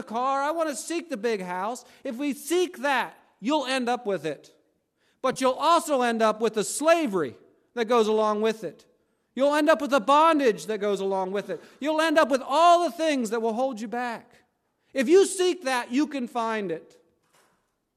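At 5.33 to 5.38 s, just before "you'll also end up", the speech briefly turns smeared and noisy, a short phasey blur of about 30 ms rather than a clean gap. This is AAC frame loss with concealment: a run of compressed frames went missing, which fits roughly three lost frames of about 10 ms each, and the decoder covered the hole by re-using and scrambling the last good spectrum. The dropout was too brief to fade into silence. The light low-delay coding heard across the clip is likely AAC-ELD at 64 kbps.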